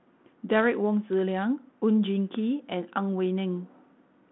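No technical faults are audible.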